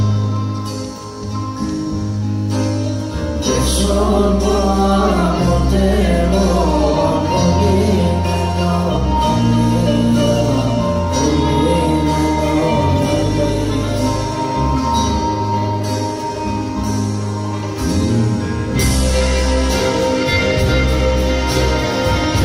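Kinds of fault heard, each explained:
No technical fault can be heard anywhere in the recording. Nothing in the signal chain draws attention to itself at any point.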